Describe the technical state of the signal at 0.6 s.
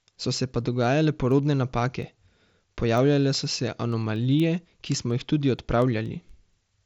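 At 0.6 s the speech sits within a run of word clock ticks from 0.13 s to 6.77 s. The receiver's clock drifts against the sender's by roughly 100 ppm, so a single sample slips about every 0.2 s, giving sharp, uneven ticks over speech limited to about 7.7 kHz by the Bluetooth mSBC link.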